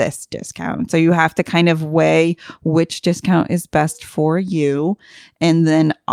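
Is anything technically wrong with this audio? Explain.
No, nothing technically wrong turns up anywhere in this bit of speech, so there's really nothing to flag.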